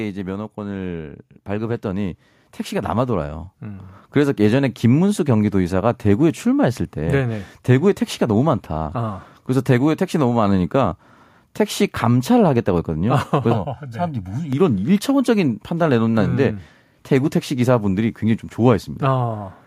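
A speech recording with two technical faults. From 0.54 s to 3.96 s there is automatic gain rising: the level climbs by about 12 dB over roughly three and a half seconds as the gain control, judging the input too quiet, keeps turning it up. The room background swells along with the talker, which separates it from someone simply leaning closer or speaking louder, where only the voice would grow. Between 13.53 s and 14.53 s the sound turns hollow and phasey, the mark of channel delay (comb filtering). One channel arrives about a millisecond and a half late, and when the two are folded to mono, shared content cancels at evenly spaced frequencies, the first notch falling somewhere around 400 Hz. That regular series of fixed notches gives a hollow, tube-like colouring rather than the even loss of treble a low-pass filter or muffled microphone would produce.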